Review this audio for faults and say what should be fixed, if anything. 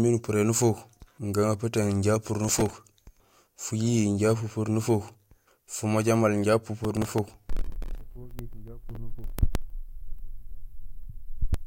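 Processor overload crackle: the processor repeatedly missed deadlines for very short buffers, around a millisecond and a half each, replaying stale audio fragments. This produces gritty crackling from 2.45 to 2.73 s, right after "gagaputung inja pupur", and a longer burst from 6.84 to 7.95 s following "fumoja maal inja". To prevent it, reduce processing load or use a larger buffer.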